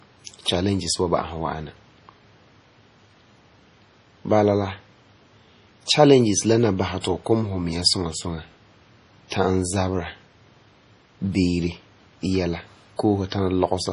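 MP3 compression runs throughout this speech clip: everything above 10.5 kHz is missing, and the heavy swirly artefacts likely come from a starved bitrate near 32 kbps.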